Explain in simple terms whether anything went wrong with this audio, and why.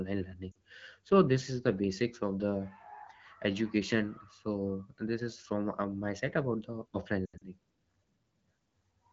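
Lost AMR speech frames caused two breaks. Radio errors corrupted small chunks of the coded voice, so the decoder had to guess, repeating the last good pitch and voice shape while turning the level down. At 0.52 s, just before "so this is the", about 40 ms went missing and you hear a quick dip or wobble. From 7.25 to 7.44 s, losses scattered through that stretch make the speech briefly fade out before returning weak or rough for a moment.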